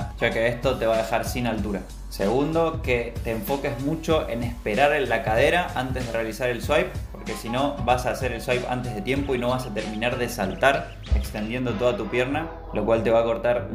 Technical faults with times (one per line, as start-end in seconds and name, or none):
3.66-7.05 low bit depth without dither